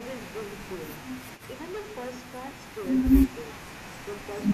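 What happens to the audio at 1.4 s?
Right around there, from 1.36 to 1.43 s, a faint delayed copy of the speech slips in, trailing the original by about 306 ms. It's very quiet, far below the main signal, and brief, so it comes across as a short ghostly scrap. The likely cause is echo leak: the far end is playing the call over a loudspeaker, their microphone picks it back up, and the echo canceller doesn't fully scrub it before sending it back.

Under that, and across the whole clip, there's hard clipping. The signal is being pushed roughly 14 dB past what some stage can handle, so the peaks get chopped flat, with around a tenth of the samples sitting at the ceiling. Those flattened tops throw off high harmonics, which you hear as a gritty, harsh fuzz on the louder parts of the speech.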